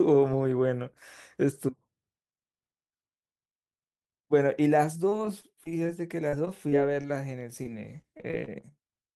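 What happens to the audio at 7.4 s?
At 7.4 s the speech is in the middle of a run of repeated packet loss (robotic sound) lasting from 6.29 to 8.64 s. About a dozen short holes, none longer than 38 ms, were each patched by stretching the preceding sound, so roughly a tenth of that stretch is concealment. The result is choppy speech with pieces missing. Unlike a single dropout, the damage repeats in quick succession, giving a stuttering, choppy texture rather than one clean gap.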